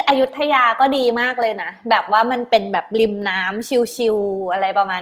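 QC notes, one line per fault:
Throughout, Opus compression: the speech carries a rough, grainy texture in place of clean tone, with plainly audible damage but less swirling and fewer watery holes than MP3 leaves. The full bandwidth is kept, yet at a rate that sounds like about 24 kbps the encoder has too few bits, likely in its CELT music mode, so it holds each band's energy and fills the detail with folded or noise-like content, making voiced sounds noisy and rough.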